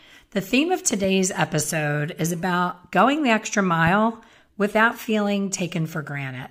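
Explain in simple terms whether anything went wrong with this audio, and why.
Two loud pops, a double one at 0.91–1.06 s after "theme of" and a single one at 3.87–3.89 s, likely electrical spikes from a plug or switch, with the speech continuing underneath.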